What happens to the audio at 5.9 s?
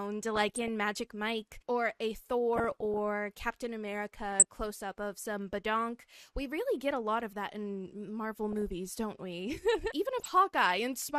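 At 5.9 s you're hearing the same dull, gurgly, grainy texture that runs through the whole clip, likely MP2 compression starved of bits, consistent with around 80 kbps, so upper sub-bands drop out and flicker.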